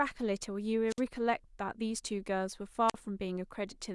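At 0.88 s the speech breaks up in a wireless microphone squelch dropout lasting until 1.01 s. The radio link from an analogue FM microphone fades. Hiss rises briefly. Then the receiver's squelch mutes the output for about 56 ms, leaving a hole of near silence before the speech returns. The same fault recurs from 2.88 to 2.94 s, with a shorter mute of about 46 ms.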